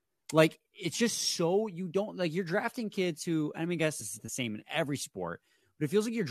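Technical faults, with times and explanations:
4.00–4.02 s, damaged data in a compressed stream: a brief glitch in the speech lasting about 20 ms. Corrupted bytes in the encoded stream made the decoder misread those frames and lose sync until it found the next valid frame header.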